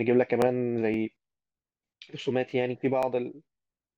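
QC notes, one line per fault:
0.42–0.44 s, 0.94–0.96 s, 1.98–2.01 s, 2.51–2.53 s, 3.03–3.05 s: overlapping chunks. Each 0.5 s chunk replays about 21 ms of the previous one, causing a stutter-click. On the waveform these show as a duplicated snippet with a step at the join, and on the spectrogram as thin vertical broadband lines.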